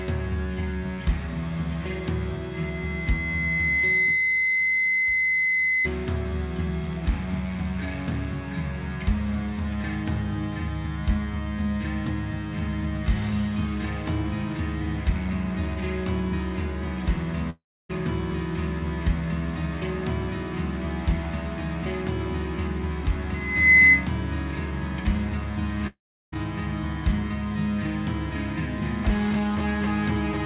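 Loudspeaker feedback squeal appears twice as a 2 kHz tone: at 2.54–5.89 s it builds over about 1.5 s to about 5 dB above the audio, and at 23.34–24.08 s it builds within about 0.4 s to about 15 dB above, each a bright horizontal spectrogram line. At 17.50–17.91 s and 25.87–26.34 s, a fading buzz gives way to silence lasting 0.28 s and then 0.35 s, with 0.40 s and 0.46 s of audio lost, most likely a long network dropout. Each shows as a waveform tail collapsing into a flat gap. Throughout, nothing appears above 4 kHz, which fits a G.711 mu-law call path at 64 kbps.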